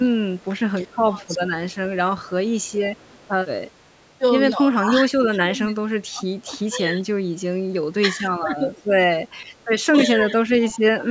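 It's a speech clip, band-limited to nothing above 8 kHz by the call's microphone processing. The voice dips by around 10 to 15 dB at 0.18, 0.91, 4.74, 8.38 and 10.16 s, with the longest stretches near 5 to 6.7 s and at the end. That's likely speech suppressed in double talk. At 3.0 to 3.12 s a very faint copy trails about 348 ms behind, most likely an echo leak from a loudspeaker end.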